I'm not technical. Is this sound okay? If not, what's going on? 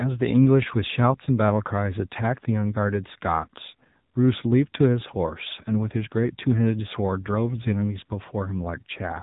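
No. From start to finish the speech sounds muffled and plainly buzzy and robotic, like an old mobile phone call. That is the AMR narrowband mobile codec: it squeezes speech into very little data and discards everything above about 3.8 kHz.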